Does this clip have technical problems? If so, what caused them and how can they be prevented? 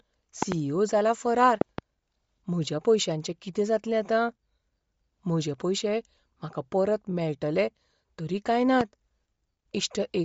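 Yes. Throughout this speech the sound is breathy and grainy, with nothing above 7.7 kHz. The cause is likely Bluetooth LC3 compression at a bitrate that sounds close to 32 kbps with 10 ms frames. The codec drops the upper spectrum and fills gaps with noise. To prevent it, use a wired connection or a higher LC3 bitrate.

Loud pops sit about 20 dB above the speech. Two come in quick succession from 0.42 to 0.54 s, just before "ई ओ जाला". Two more fall between 1.61 and 1.81 s, and a single pop occurs from 8.81 to 8.83 s, right after "तरी काय". Each is likely a voltage step from a plug, switch or static discharge entering the signal path. To prevent them, secure connectors, avoid switching during recording, and ground the equipment properly.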